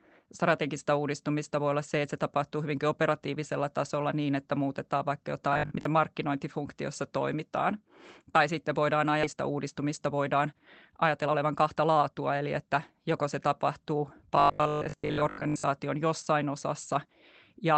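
This speech clip, carried over a call path whose top end stops around 8 kHz, shows three kinds of fault. From 5.53 to 5.85 s and again from 14.36 to 15.64 s, just after "joko se tapahtuu", new audio likely arrived too rarely, so playback kept looping the last short buffer instead of moving on. The repeats impose a fixed 50 Hz buzz, which fits a 20 ms buffer, and most of the sound in those stretches is recycled. The result is robotic sound from repeated short buffers: a hard, metallic drone that only loosely tracks the speech. At 9.23 to 9.25 s, right after "sitten voidaan", a stretch of about a second and a half was dropped while later audio was already queued. This is a skip ahead. Playback leaps forward with no filler, and the audio on either side of the cut is butted together almost seamlessly, so the missing material simply vanishes. From 9.33 to 12.91 s, ending at "joko se tapahtuu", the jitter buffer held more audio than it wanted and trimmed pitch-period-sized slices again and again, removing around 0.4 s in total. 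This jitter buffer speed-up makes the speech run about 12 percent fast at unchanged pitch, so it sounds rushed.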